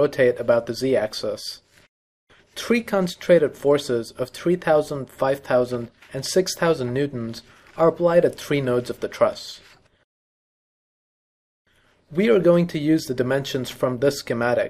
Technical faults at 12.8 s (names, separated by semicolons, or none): clock slip clicks